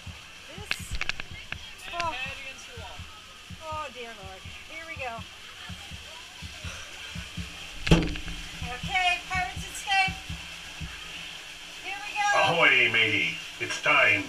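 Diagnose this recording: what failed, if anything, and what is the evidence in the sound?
Nothing failed; no stage shows any fault.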